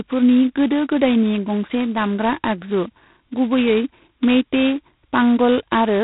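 A speech clip with a harsh, rasping hiss riding on the voice throughout and nothing above 3.9 kHz: heavy G.726 ADPCM damage, which fits the 16 kbit/s rate.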